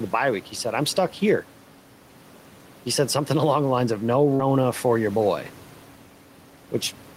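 Gain pumping runs through the whole clip. Input gain set far too high for the microphone, with a fast limiter likely clamping it on every loud syllable, makes the level swing by around 5 dB. The room noise sits about 28 dB below the speech, and the delivery is left flattened and squashed.

At 4.35 to 4.42 s there is a short concealed packet loss. Roughly 40 ms of audio failed to arrive in time, and the receiver bridged the gap by extending the preceding sound before blending back into the real signal, producing a brief smear or wobble in the speech.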